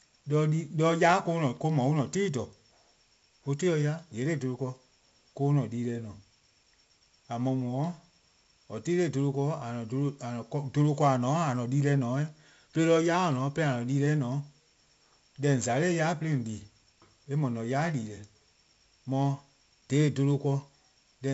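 From start to finish the speech carries heavy 4-bit ADPCM compression damage. Each sample is coded as a coarse step from a predicted value, so the error rides along with the level: a gritty hiss swells on every loud syllable, and sharp onsets smear and crunch as the step size lags behind. Nothing survives above 7.7 kHz, which fits a 64 kbps stream at a 16 kHz rate. A spectrogram shows a hard ceiling at 7.7 kHz and broadband noise filling the gaps between harmonics wherever the speech is loud.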